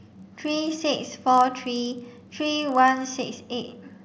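Speech with a filter restarted on every block throughout: each block starts from a cleared filter state, leaving a small transient that forms a 31.2 Hz tick-buzz tracking the speech level, which fits a 512-sample processing buffer.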